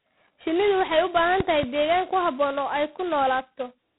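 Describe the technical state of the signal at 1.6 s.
At 1.6 s the signal sits inside a loud pop spanning 1.40 to 1.65 s, after "waxay u" and before "deegaan ku habboon oo". Two sharp pops, likely from a voltage step or pulse, rise well above the speech (around 15 dB) and show as tall waveform spikes with full-height vertical spectrogram stripes. Throughout, G.726 ADPCM at 16 kbit/s adds a harsh, level-following rasp and removes everything above 3.9 kHz, leaving a hard spectral ceiling.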